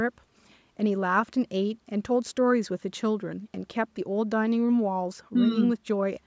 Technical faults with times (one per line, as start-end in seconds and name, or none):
none